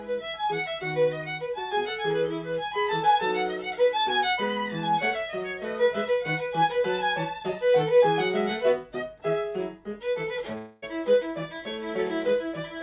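At 10.58 s the audio gives way to a smeared continuation of the preceding sound, a buzzy, fading tail lasting about a quarter of a second, until 10.84 s. No true silence opens up; the filler covers the whole gap. When the audio resumes, roughly 240 ms of material is simply absent. This is a long network dropout, likely caused by a run of lost packets that the receiver concealed by extrapolating the last sound, over a narrowband G.711 path with nothing above 4 kHz.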